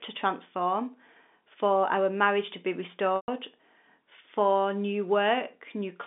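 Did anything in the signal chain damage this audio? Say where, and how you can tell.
Yes, at the network stage. Right after "our marriage to be", from 3.16 to 3.28 s, there's packet loss with pitch repetition. The receiver loops the last pitch period into a brief buzzy hold, fades it to silence over about 50 ms within the 120 ms gap, then cross-fades back, which fits roughly a dozen lost 10 ms packets.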